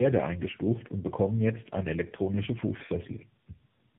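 Speech shows tandem speech coding throughout. Nothing sounds above 3.8 kHz, and the roughness, muffling and warble are heavier than a single low-rate codec leaves. That points to about three speech coders in a row, each re-encoding the previous one's degraded output.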